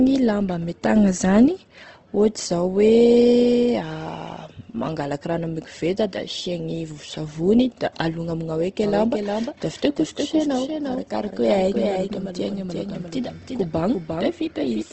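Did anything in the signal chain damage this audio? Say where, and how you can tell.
Yes, at the codec stage for the whole clip. Nothing reaches above about 8.1 kHz, so the speech sits in a wideband-limited channel, and the top of it sounds rough and grainy rather than swirly. That points to Opus compression, likely in its CELT music mode at a low rate around 16 kbps. When bits run short there, the encoder keeps each band's energy but fills the detail with folded or noisy content.

There's also a doubled audio track from 8.83 s through to the end. A second full-band copy of the speech comes in abruptly, trailing the original by roughly 400 ms and about 5 dB quieter. It has no reverb tail or room colour, so it isn't an acoustic echo. It's likely a call-processing or routing problem, where a slower path captured the same signal again and mixed it back in.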